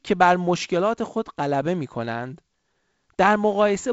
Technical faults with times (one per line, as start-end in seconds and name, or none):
none